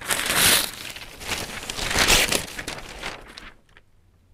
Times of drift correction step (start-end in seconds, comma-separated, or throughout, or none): 1.49-3.79